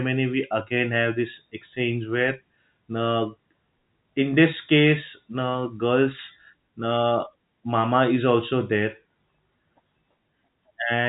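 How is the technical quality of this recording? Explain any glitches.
The technical quality holds up, and there are no glitches to explain.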